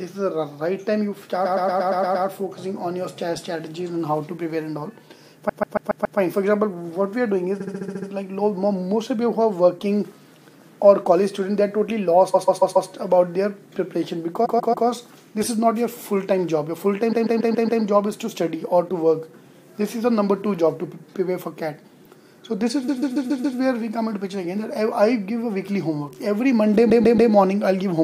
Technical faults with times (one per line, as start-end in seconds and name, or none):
1.44-2.25 repeated frames
5.48-6.18 repeated frames
7.59-8.08 repeated frames
12.33-12.89 repeated frames
14.44-14.86 repeated frames
17.11-17.81 repeated frames
22.87-23.57 repeated frames
26.89-27.31 repeated frames